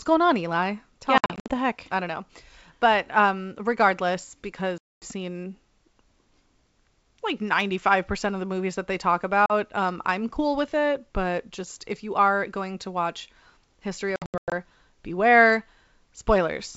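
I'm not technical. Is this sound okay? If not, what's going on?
No. This is speech on a phone call with packet loss on an ADPCM call. Short stretches of sound go missing and leave abrupt silent gaps. These come at 1.18 to 1.53 s, just before "heck I don't know", at 4.78 to 5.07 s, after "um regardless", briefly at 9.46 s, after "movies that they talk", and at 14.16 to 14.53 s. After each gap, the receiving end has lost track. The speech comes back slightly distorted, then settles.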